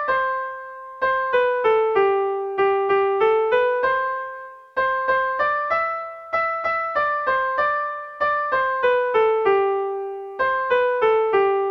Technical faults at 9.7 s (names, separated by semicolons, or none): none